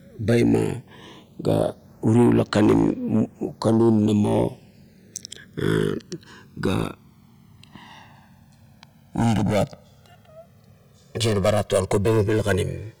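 Speech, with the channels drifting apart throughout: separate device clocks, roughly 200 ppm off, slide the lag to about 2 ms, so mono sums sweep comb notches as slow flanging.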